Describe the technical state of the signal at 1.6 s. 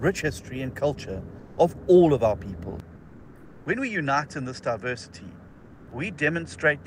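Right around there you're just coming out of a stretch of comfort noise in place of the background, running 1.39 to 1.57 s. For those 180 ms the real background gets swapped for a flat, featureless hiss about 6 dB quieter, likely from Opus DTX pausing transmission while the receiver synthesizes filler noise.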